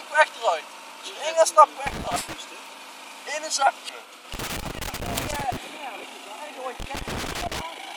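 The audio has two recurring faults. Compressed frames are skipped at 0.91, 2.16, 3.89 and 6.03 s, and each time the sound leaps forward by roughly 150 to 200 ms, which fits a run of 32 ms frames being dropped. Each join shows as an abrupt discontinuity on a spectrogram. Loose connector crackle runs from 1.86 to 2.35 s, 4.34 to 5.57 s and 6.80 to 7.61 s, as a contact rapidly making and breaking chops the signal into irregular scratchy bursts. On a waveform this looks like ragged gaps and spikes, and on a spectrogram like scattered broadband vertical streaks.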